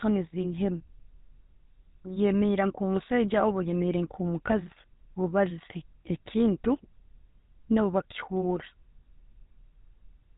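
GSM full-rate coding runs throughout the speech, and the damage is plainly audible from start to finish. The codec models the vocal tract as a filter and excites it with a sparse, regularly spaced pulse train, keeping only a third of the excitation samples, which fits a bitrate of about 13 kbps. The result is a buzzy, gravelly roughness riding on every voiced stretch, and a dull, boxy band with nothing above 4 kHz.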